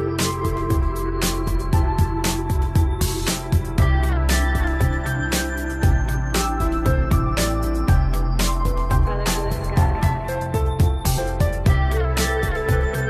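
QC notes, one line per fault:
9.06 s and 11.17 s, compressed frames skipped: the audio jumps ahead about 150 ms, around seven frames of roughly 23 ms each.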